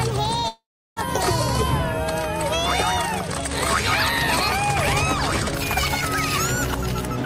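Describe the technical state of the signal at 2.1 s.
At 2.1 s the signal is intact, with no dropout, distortion, glitch or other technical fault at that point.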